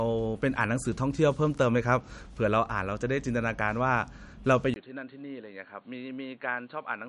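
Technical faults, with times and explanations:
Throughout, MP3 compression: the encoder likely ran short of bits at a rate that points to around 57 kbps, so it dropped weak frequency lines that flicker on and off between frames and cut everything above 11.1 kHz. The result is plainly audible codec damage, giving the speech a watery, swirling texture with metallic chirps on s sounds, smeared attacks and a top end that stops abruptly.
4.74 to 7.09 s, input switched to a poorer device: the recording chain changed its input, likely to a lower-grade microphone or headset call profile, after a brief 20 ms gap at the switch. The new device passes nothing above 4.4 kHz, so the speech suddenly loses its treble and sounds duller. It also arrives roughly 10 dB quieter and brings its own background noise, sitting far below the speech, which continues to the end.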